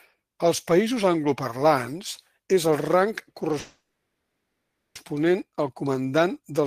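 At 3.59 s a call audio freeze sets in until 4.97 s: the speech stalls, a brief fading buzz or hiss gives way to about 1.1 s of silence, then resumes exactly where it stopped, likely from delayed packets draining the jitter buffer, so unlike a dropout nothing is lost.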